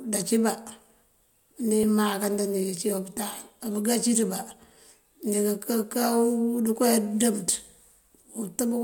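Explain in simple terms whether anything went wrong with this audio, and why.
At 1.83 s the speech has a tiny skip where a sliver of sound is missing. This is an overlap between stream segments: two chunks, each about 4 seconds long, claimed the same moment, and the player trimmed real audio. Unlike a dropout, there's no silent gap, just a jump.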